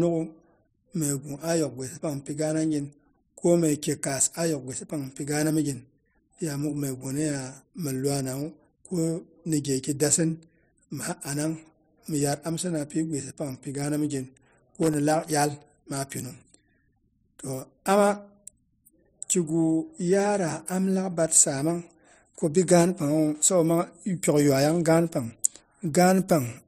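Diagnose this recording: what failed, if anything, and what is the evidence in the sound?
Loose connector crackle, 14.82 to 14.94 s, between "mipi gaana mi gin" and "laak iyal maa pinung": in the analogue wiring, a bad contact makes and breaks, chopping the signal into irregular scratching.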